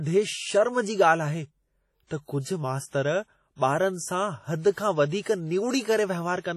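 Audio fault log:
throughout, WMA compression: the speech was likely squeezed through a Windows Media Audio transform encoder at a low rate, and the heavy damage fits a bitrate around 32 kbps. The encoder quantised coarsely over long blocks, so its noise smears across tens of milliseconds around each syllable, giving a ringing, washy edge and a hiss that swells and fades with the speech. Weak spectral detail has been discarded, and nothing remains above 14.3 kHz.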